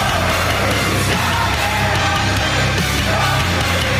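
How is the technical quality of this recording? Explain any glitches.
No glitches to report: nothing in the recording stands out as a technical fault.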